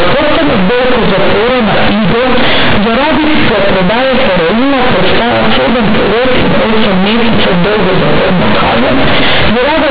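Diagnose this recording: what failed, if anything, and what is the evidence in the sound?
Sample-format conversion failed throughout: companded audio read as linear. Mu-law bytes play as raw 8-bit samples, unexpanded. Speech becomes loud, buzzy distortion with noise in pauses.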